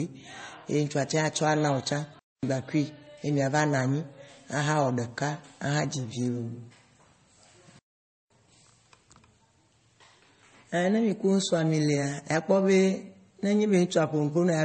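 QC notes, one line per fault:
Throughout: transcoding between lossy codecs. The speech carries two layers of coding damage heard together: a low-rate MP3 stage, around 32 kbit/s, left its artefacts, and a later WMA stage at about 96 kbit/s added its own while spending bits re-encoding those earlier artefacts. Nothing sounds above 8.4 kHz, because the lowest cut-off in the chain survives every later pass. The likely chain is MP3 into WMA.
2.19 s to 2.43 s and 7.79 s to 8.30 s: playback stall. The speech stops dead in mid-flow and the output goes silent, first for about 0.24 s, then for about 0.51 s, before the sound picks up again. This is as when a player runs dry of buffered data or its audio thread is held up and output simply halts until it recovers. Likely cause: buffer underrun or a blocked playback thread.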